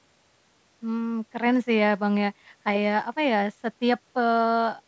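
Speech, with no technical faults present.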